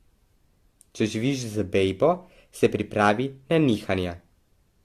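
Speech, with generation loss running through the whole recording. The sound is swirly, smeared and hollow, and consonant attacks blur. Nothing remains above 14.3 kHz. The likely cause is repeated lossy re-encoding, about five passes, each quantising on a shifted frame grid. This fits an AAC-LC chain near 64 kbit/s.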